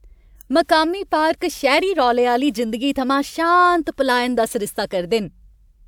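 No technical faults can be heard anywhere in this recording.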